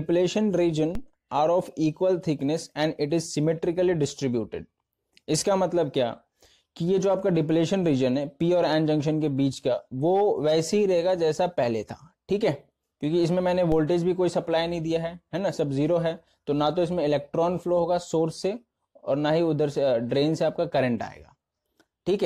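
At 0.95 s and again at 13.72 s the audio has a DC step: the zero line of the waveform jumps by about -21 dBFS, then decays away as if passed through a 5 Hz high-pass. Each one is heard as a low thump or click while the sound continues unchanged. On a waveform the trace lifts off centre and slides back. A spectrogram shows a brief broadband line with energy gathered at the very bottom.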